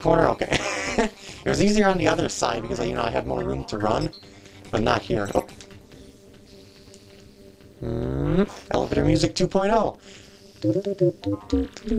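From start to finish, the level pulses in a fast, deep buzz. This is overlap-add ripple. The audio was split into windowed frames and rebuilt with an overlap whose windows do not add up to a steady gain. So the level dips and swells once per frame, at a rate of around 200 Hz. The swing is about 60 dB, almost silence at each dip. It sounds like a harsh, metallic buzz with extra tones around each note over all the sound.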